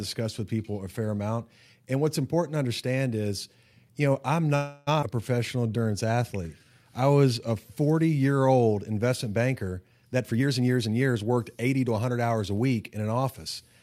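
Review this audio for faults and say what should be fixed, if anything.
A call audio freeze runs from 4.55 to 4.89 s. The last sound is stretched into a fading fill for 315 ms. Nothing is lost, but the audio resumes 315 ms later. Delayed packets likely emptied the jitter buffer. Stabilise network delivery to prevent it.

A skip ahead occurs from 5.01 to 5.04 s, right after "is you know I'm". Roughly a fifth of a second of audio is gone. The two sides are joined with only a 14 ms fill. The audio was dropped in transit or by an overflowing jitter buffer while later audio was waiting. Size the buffer so it does not overflow.

A jitter buffer slow-down runs from 5.39 to 6.75 s, ending before "I was a". Pitch periods were repeated to rebuild a reserve. This added 184 ms. The audio plays at 87% speed, sounding drawn out at the same pitch. Keep the buffer from running low.

A jitter buffer speed-up runs from 10.12 to 11.99 s, between "year old investment banker" and "hours a". 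Short pitch-period pieces were cut to reduce excess delay. Around 300 ms is removed. The audio runs at 116% speed and sounds hurried. Smooth packet arrival so bursts do not overfill the buffer.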